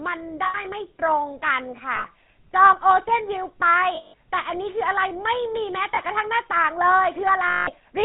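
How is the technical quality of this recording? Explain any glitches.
The technical quality is poor. The speech has passed through a narrowband phone codec and carries several dropouts and two small skips.

Throughout, the GSM full-rate codec gives the voice a buzzy, gravelly roughness, and nothing above 4 kHz survives. The codec rebuilds speech from a vocal-tract model excited by coarsely spaced pulses, at a rate consistent with 13 kbps. This is what produces the grain. Unlike plain band-limiting, it adds a harsh texture as well as dullness.

Lost GSM frames occur at 0.44–0.60 s (about 100 ms), 1.96–2.06 s (80 ms), 3.96–4.14 s (180 ms), 5.95–5.99 s (20 ms) and 7.47–7.70 s (200 ms). The decoder fills each gap by repeating the settings of the last good frame, so the sound freezes into a metallic ring. The longer gaps at 3.96 s and 7.47 s ring longest. This held, droning tone separates them from a simple cut.

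At 2.73 s and 4.88 s there is an abrupt jump forward in the sound and no gap or ringing. Each jump is most likely a dropped buffer (overrun): the recording program fell behind, the hardware overwrote a few milliseconds of samples, and the audio on either side was spliced directly together. These are brief skips, unlike the sustained smeared ring of the frame losses.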